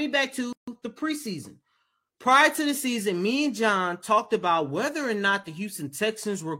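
At 0.53 s the speech drops into a roughly 150 ms gap with smeared edges before resuming on "the preseason prior to": a gap at a join of encoded pieces, where untrimmed encoder padding stayed in.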